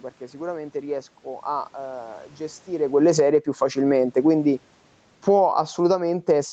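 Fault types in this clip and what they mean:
Automatic gain falling: the gain control judges the input too loud and pulls its gain down gradually, so speech and room noise sink together. Here it drops about 11 dB from 2.68 to 3.37 s and about 6 dB from 5.13 s to the end. On a waveform the envelope tapers, and the spectrogram dims evenly across all bands, background included.
Automatic gain rising: the gain control judges the input too quiet and lifts its gain gradually, so speech and background swell as one. It climbs about 5 dB from 3.28 to 4.29 s, overlapping the end of a fall, and about 6 dB from 5.45 to 6.41 s after the input level drops by about 23 dB. A waveform shows the envelope widening slowly, and the spectrogram brightens uniformly, noise floor included.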